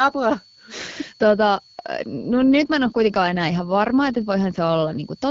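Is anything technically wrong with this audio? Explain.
Yes, there are two faults.

Throughout the clip, a switching power supply is running in an audible burst mode or beating with another one, producing a switching supply whistle. It is a thin high tone sitting between 4.36 and 4.5 kHz and roughly 30 dB below the speech.

From 2.18 s to 5.02 s, there is an AMR rate drop. The link appears to weaken, and the network pushes the AMR-WB codec to a lower mode, spending more bits on error protection. The speech keeps its full band without any gap but turns rougher and more synthetic. This fits a step down from 12.65 kbit/s, where the codec's damage is only light, to 8.85 kbit/s.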